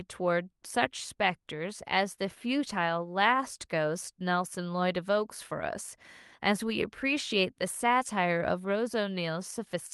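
Speech recording with no audible technical faults.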